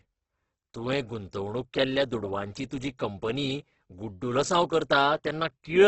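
Throughout, the speech sounds grainy and rough, likely heavy Opus compression at a very low bitrate; a spectrogram shows a hard ceiling near 8.2 kHz with noisy, smeared bands below.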